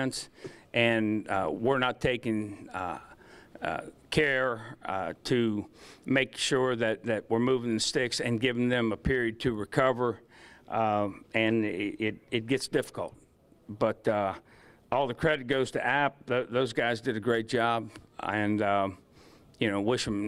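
From 11.51 to 16.79 s a call bitrate drop forces coarser encoding, consistent with roughly 128 falling to 22 kbps: the sound turns rough, watery or muffled, then clears.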